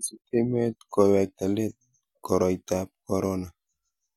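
Nothing in the recording stood out as a technical problem on listening.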